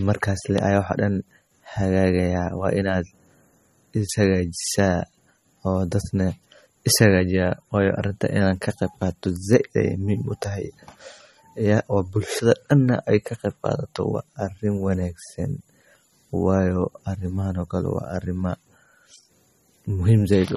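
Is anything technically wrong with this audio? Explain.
Yes. Plainly audible MP3 compression damage runs through the whole speech clip, likely from a low-bitrate encode near 32 kbps. Starved of bits, the encoder discarded everything above 13.7 kHz and weak frequency lines, giving a watery, swirly sound. A spectrogram shows a flat ceiling at 13.7 kHz with speckled gaps beneath it.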